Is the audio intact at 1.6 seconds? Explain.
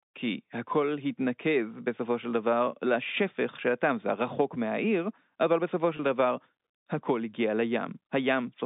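Yes, the speech is intact at 1.6 seconds, with nothing wrong at that moment beyond the narrow, band-limited sound of the telephone line it was carried over.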